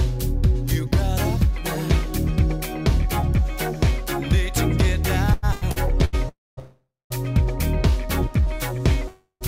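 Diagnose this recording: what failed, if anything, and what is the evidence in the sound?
Repeated stalls (stutter) at the network and jitter-buffer stage: between 5.33 and 6.15 s, packets arrived late or too slowly to keep up with playback, so the buffer ran dry four times. The receiver filled each gap by extending the last sound, about 309 ms in total, with the longest single gap around 92 ms. That concealment covers roughly 38% of the stretch. Nothing is lost, but the audio drags and hiccups through that passage.

Call audio freeze, three times: 6.29 to 6.59 s, straight on from 6.59 to 7.12 s, and 9.08 to 9.43 s. Each is likely a network hold-up that drained the jitter buffer completely. The receiver stretched the last sound into a fading buzz or hiss and then went quiet. Those quiet tails last about 220, 230 and 110 ms. The audio then resumed where it had stopped, adding roughly 284, 511 and 330 ms of delay without dropping anything.

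Jitter buffer slow-down from 7.91 to 9.02 s: the buffer was short of reserve. The receiver rebuilt it by repeating individual pitch periods and fragments of pauses, inserting about 55 ms. Playback ran at about 96% speed with the pitch unchanged. Sounds through that span come out slightly drawn out and sluggish.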